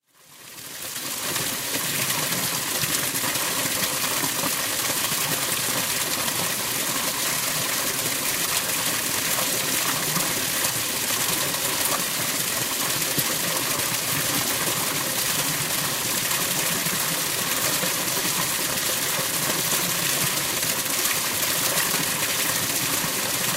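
Three stretches have chunks out of order. Each chunk is 250 ms long. At 1.25 to 1.75 s, one chunk plays a chunk late. At 3.0 to 4.0 s, a chunk arrives three chunks late and lands after the audio meant to follow it. At 9.0 to 9.5 s, one chunk is again a chunk late. Nothing goes missing. The sequence is simply wrong, with three hard joins each time. Each spot sounds jumbled.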